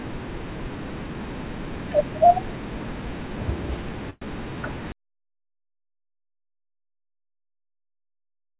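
At 4.10 s, delayed packets likely emptied the jitter buffer, causing a call audio freeze: a fading buzz fills 114 ms before speech resumes at 4.26 s.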